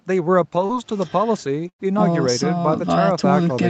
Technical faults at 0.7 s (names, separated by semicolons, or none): short concealed packet loss